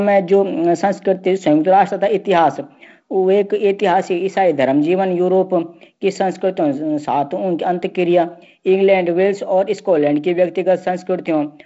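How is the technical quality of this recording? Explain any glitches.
There are no glitches in this speech recording: it comes through a G.722 wideband telephone channel, so nothing is present above about 7.7 kHz, and the 48 kbit/s mode leaves only light, steady coding texture, with nothing interrupting or disturbing the signal along the way.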